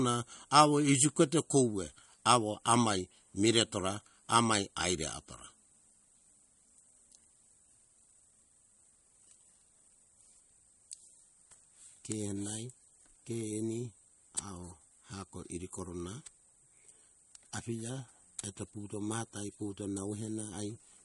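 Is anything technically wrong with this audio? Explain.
Yes. Throughout the speech, the sound bears the marks of MP3 compression, likely at a starved bitrate that fits something around 48 kbps. Short of bits, the encoder has dropped everything above 11.2 kHz and zeroed the weaker frequency lines, which flicker in and out from one frame to the next. The result is plainly audible: a dull top end, a watery, swirling texture, metallic chirps on s sounds, and smeared consonant attacks.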